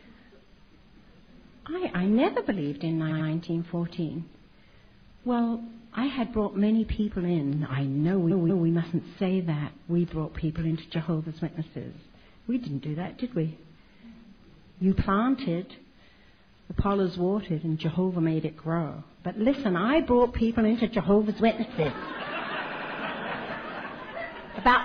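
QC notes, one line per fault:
3.07–3.25 s, repeated frames: a short stutter, as a 93 ms slice of audio plays twice more. The same compressed block was written again. This adds about 0.19 s.
8.27–8.64 s, repeated frames: a longer stammer. A 186 ms block, which fits a run of several frames, repeats twice and adds about 0.37 s.
22.67–22.95 s, repeated frames: a rapid triple stutter, as a 93 ms block plays three extra times. This adds about 0.28 s.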